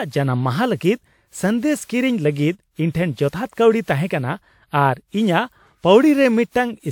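From start to finish the speech carries generation loss: a swirly, hollow smearing with softened consonant attacks, while the top of the spectrum still reaches up to 20 kHz. That mismatch is what separates it from a single low-bitrate encode, where the highs would be trimmed away. The audio was likely run through a lossy codec about seven times, each pass requantising on a shifted frame grid, which fits a WMA chain near 128 kbit/s.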